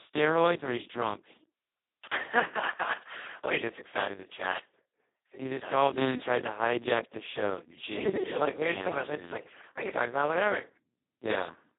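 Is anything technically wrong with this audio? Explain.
Yes. Speex codec, throughout: the speech is coded with so few bits for the excitation that the coder acts almost like a vocoder, which fits a very low setting near 2 kbps. It sounds hoarse, buzzy and robotic, confined to roughly 200 Hz to 3.7 kHz, with nothing above 3.8 kHz.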